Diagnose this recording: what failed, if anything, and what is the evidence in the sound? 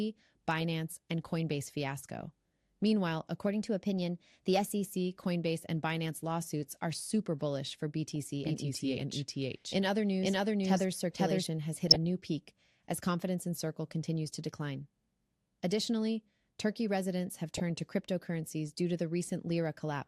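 The whole recording has a dull top end and a gurgling, granular texture on the speech, with upper bands flickering in and out. This is likely MP2 compression at the codec stage, starved of bits so that high sub-bands drop out, which fits a rate around 80 kbps.

DAB burbling, a transmission-stage fault, appears at 1.42–1.52 s, 8.10–8.16 s, 11.87–11.96 s and 17.55–17.70 s as short bursts of noise blips. Under weak reception, residual bit errors corrupt MP2 frame data, so wrong samples put short blips of noise into individual sub-bands.

Two drift correction steps occur at the driver or buffer stage. From 3.47 to 4.96 s the audio runs 5.86% fast and about a semitone sharp. From 8.64 to 9.64 s it runs 5.86% slow and about a semitone flat. Each time it then snaps back. A clock-matching resampler likely jumped rate in one step to rebalance its buffer.

A doubled audio track runs from 8.45 to 11.47 s. 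A second full-band copy at roughly equal level trails by about half a second, with no reverb colouring, and it starts and stops abruptly. The copy likely comes from a capture or routing path that took the signal twice.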